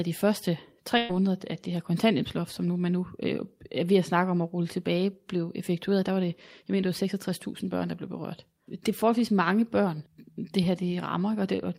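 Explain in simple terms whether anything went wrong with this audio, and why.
Yes, there's one hiccup. Right after "de første", at about 0.97 s, the speech briefly turns into a held, fading buzz until about 1.11 s, and then it jumps ahead to "at det her kontanthjælpsloft". That's a burst of packet loss. A handful of audio packets never arrived in time, so the receiver stretched out the last sound and let it fade to cover roughly 120 ms. That little chunk of speech is simply gone.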